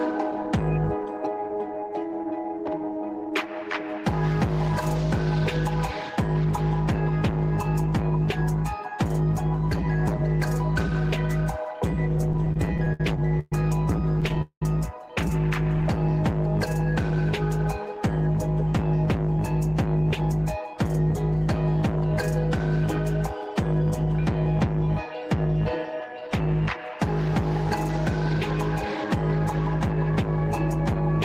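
From 12.18 to 13.53 s and again from 14.21 to 14.62 s there are repeated stalls (stutter). Packets reached the receiver too late, so its jitter buffer kept running dry, and each time it extended the last sound to fill the wait. The first stretch has ten gaps totalling 292 ms, the longest 121 ms. The second has four gaps totalling 228 ms, with one of 198 ms faded down. The audio halts and restarts, but nothing drops out, which is what separates it from packet loss.

Between 15.77 and 17.11 s a jitter buffer slow-down stretches the sound by 44 ms, so it runs at 97% speed. The receiver rebuilt its reserve by repeating single pitch periods many times in a row. Unlike the stutter, it never stops. Sounds are drawn out and the pitch stays put.

A jitter buffer speed-up runs from 19.38 to 22.33 s and again from 23.46 to 27.29 s, each time at 103% speed. With too much audio queued, the receiver cut out short pitch-period pieces, about a tenth of a second in each stretch. 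The sound runs slightly faster at unchanged pitch, which distinguishes it from a resampling error, where pitch would rise too.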